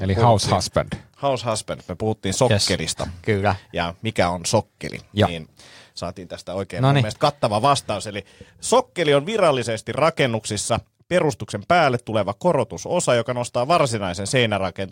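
Repeated buffer at 2.65 s, 3.91 s just before "mikä on sokkeli", and 13.78 s just after "tuleva korotusosa joka nostaa": fresh audio arrived late, so the last tiny block replayed. Each repeat of about 1.3 ms, which fits a 64-sample buffer, sounds as a click or brief buzz, not a stutter.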